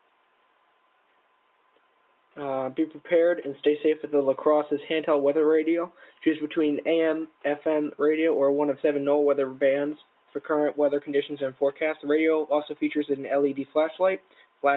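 A noise suppressor applied to music or sounds is active from start to finish. Tuned for speech, it reads steady tones, ambience and tails as noise and attenuates them, so the level pumps by around 5 dB while held sound thins and transients pass largely intact.

Sound cut by the noise suppressor occurs at 0.01–2.36 s, 5.9–6.22 s, 7.28–7.44 s, 9.99–10.49 s, 11.54–12.05 s and 14.18–14.63 s. There the suppressor clamps sustained or decaying content harder, by about 12 dB (about 11 dB near 6 s), so sound sinks and decays cut short.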